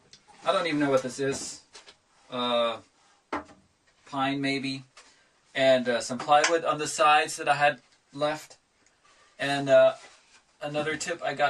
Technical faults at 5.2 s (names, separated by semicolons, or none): none